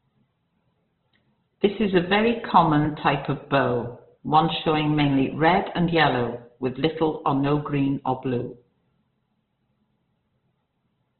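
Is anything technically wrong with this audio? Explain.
Yes. Throughout, the speech is cut off above 4.3 kHz and sounds muffled, rough and grainy. The likely cause is heavy Opus compression in its CELT mode, at a rate that points to about 12 kbps: bit-starved bands get filled with folded or noise content, and the narrowed bandwidth removes the top.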